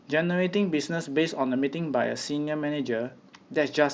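At 2.45 to 2.47 s, concealed Bluetooth headset packet loss: a short run of lost packets, about 22.5 ms, filled by repeating the last stretch of waveform. Unlike a dropout, there is no silence or click, just a brief buzzy hold and slight warble, beneath the light graininess of the mSBC link.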